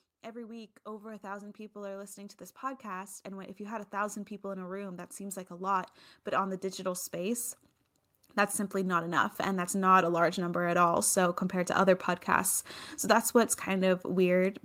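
From 0.23 to 7.5 s the automatic gain rises about 14 dB as the control chases a quiet input, lifting speech and background together; from 8.71 to 10.9 s it climbs about 5 dB more, ending before "so compared to other". Waveform envelopes widen steadily; spectrograms brighten uniformly across all frequencies.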